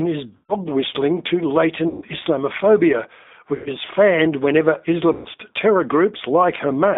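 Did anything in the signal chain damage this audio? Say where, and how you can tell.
Yes. The speech sounds slightly rough and synthetic, and it is confined to roughly 200 Hz to 3.7 kHz. Nothing comes through above 4 kHz. This is the G.729 codec at the codec stage, which fits an 8 kbit/s G.729A stream that rebuilds speech from a vocal-tract filter and sparse pulses.

At 0.37–0.54 s, 1.88–2.05 s, 3.56–3.71 s and 5.13–5.29 s, the sound smears into a buzzy, fading tone and is weak or distorted for a moment afterwards. This is VoIP packet loss concealed by the speech codec. On the network side, 100–140 ms of audio went missing each time, and the decoder filled each gap by extrapolating its last pitch and filter at falling gain.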